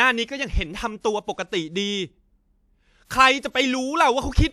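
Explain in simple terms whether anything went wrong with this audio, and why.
Pre-echo at about 3.05 to 3.11 s: a short hiss creeps in just before a sharp sound starts, blurring its edge. The compression works in short blocks and spreads its noise across each block, so noise meant for the loud attack leaks into the quiet moment before it.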